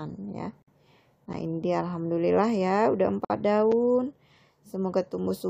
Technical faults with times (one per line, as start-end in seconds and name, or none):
0.62-0.68 gap at a join of encoded pieces
3.25-3.30 gap at a join of encoded pieces
3.72 block of digital silence